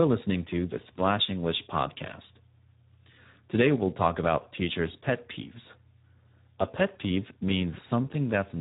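From start to finish, the speech has passed through the Speex codec at a low quality setting, and the sound fits a rate of around 8 kbps. At that rate the CELP coder has too few bits to describe the excitation, so the speech comes out heavily damaged: hoarse, buzzy and noisy, edging toward a robotic vocoder quality. Nothing is left above 3.9 kHz, giving a narrowband, telephone-like dullness.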